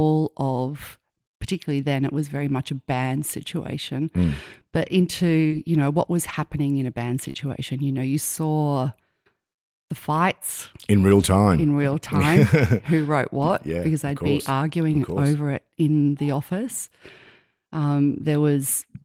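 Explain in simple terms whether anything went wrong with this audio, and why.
Short concealed packet loss at 5.47 to 5.53 s and 7.31 to 7.36 s: a few hundredths of a second of speech arrived too late, so the receiver stretched the preceding sound to cover the hole, leaving a brief smear or wobble.

Lost packet rebuilt from error correction at 5.51 s, 6.29 to 6.35 s, 7.23 to 7.29 s, 7.36 s, 11.2 s, 13.4 to 13.5 s and 15.14 s: each missing piece was replayed from a rough backup copy sent in the next packet, so nothing drops out, but those moments sound grainier and noisier.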